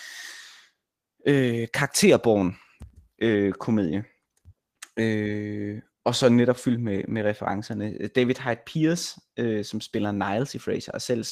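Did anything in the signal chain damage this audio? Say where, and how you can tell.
No, nothing in the signal chain damaged this audio.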